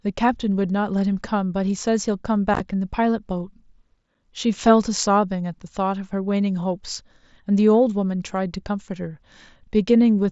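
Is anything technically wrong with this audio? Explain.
Yes. Unconcealed Bluetooth headset packet loss occurs at 2.54–2.60 s and again at 4.14 s. Lost voice packets are replaced by silence or an idle pattern, leaving abrupt gaps. On the waveform these show as abrupt dropouts, and on the spectrogram as vertical slices.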